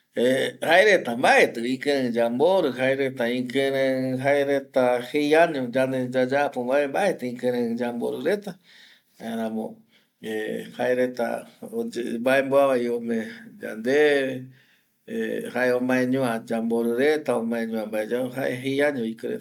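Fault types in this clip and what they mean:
Generation loss: the speech sounds swirly, hollow and smeared, with soft consonant attacks, likely from about four successive MP3 encodes near 130 kbit/s. A spectrogram shows flickering spectral holes and a hard ceiling at 20 kHz, and the waveform shows blurred transients.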